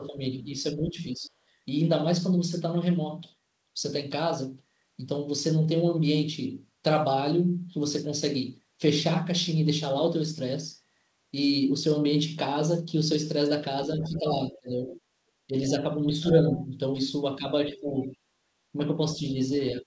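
From the start to 1.31 s the speech is suppressed in double talk. It dips by up to about 10 dB, in pieces adding up to roughly half a second, likely because the echo canceller, faced with both sides talking, turned everything down. On the waveform the envelope shrinks in patches. On the spectrogram the harmonics fade, and the band already empty above 8 kHz from the call codec stays empty. At 1.25 to 1.29 s a faint scrap of the other side's voice leaks through, about 35 dB below the speech, visible only as a thin smudge.

From 13.97 s to the end, double-talk suppression returns much harder, cutting the speech by up to about 40 dB. The waveform collapses to near silence in stretches, and the spectrogram shows whole blocks blanked. Across the same span the other side's voice leaks through at 14.02 to 16.66 s, about 20 dB below the speech, and again at 17.73 to 18.08 s, about 25 dB down. Both show as a second set of weaker harmonics where the main speech has been pushed down.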